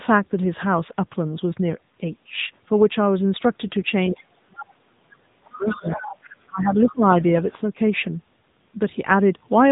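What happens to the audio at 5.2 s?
At 5.2 s the speech is in the middle of a suppression span from 4.1 to 6.02 s, most likely speech suppressed in double talk: the echo canceller mistook near-end speech for loudspeaker echo and attenuated it, dropping the level by about 35 dB at its deepest.

The whole clip, including this moment, carries the AMR narrowband mobile codec. Its vocal-tract model, fed with only a few pulses per subframe, makes the speech buzzy and synthetic, consistent with a low bitrate near 8 kbps. Nothing above 3.8 kHz is present, so the sound is muffled.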